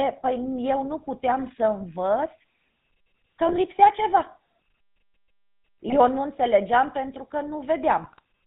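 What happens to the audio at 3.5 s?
From 3.46 to 3.55 s, GSM bit errors break the sound into a brief squawk and gargle. Flipped bits corrupt filter, pitch and gain values, which fits about four damaged frames. Underneath, the GSM full-rate codec at 13 kbps gives a plainly buzzy, gravelly roughness. It passes nothing above 4 kHz.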